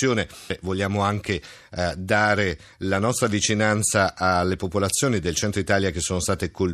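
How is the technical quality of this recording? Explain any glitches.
No glitches or technical faults can be heard here.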